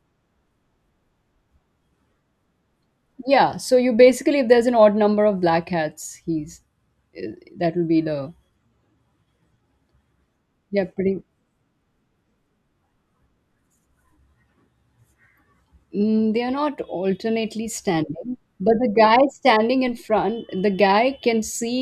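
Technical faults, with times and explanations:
Nothing technical stands out anywhere in this speech recording, so there's no fault to list.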